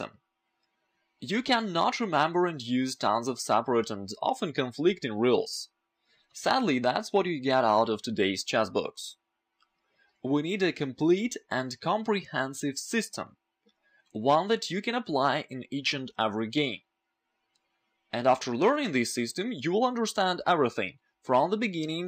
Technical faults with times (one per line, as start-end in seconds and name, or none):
0.19-21.90 clock slip clicks